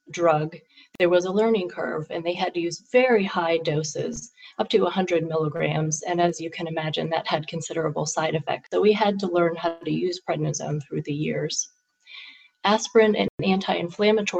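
At 0.95 s the audio drops to silence for 45 ms, and at 13.28 s for 112 ms, then resumes. These gaps point to a likely Bluetooth stall: interference delayed packets, the receiver's buffer emptied, and playback paused until retransmitted data arrived.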